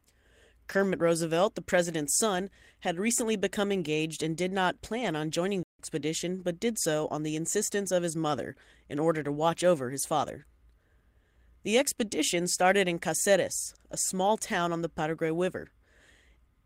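Lost packets rebuilt from error correction occur at 0.69–0.83 s, 2.35–2.37 s after "the president's", 3.19–3.21 s, 5.01–5.11 s between "engaged and did not" and "on joining", and 7.53–7.59 s between "did so on the" and "of his mother in". Each is 20 to 80 ms of rougher, noisier speech decoded from low-bitrate backup copies. Unlike concealment or dropouts, the speech never breaks. A playback stall at 5.63–5.79 s cuts the sound to silence for about 160 ms mid-flow, likely because the player ran out of data.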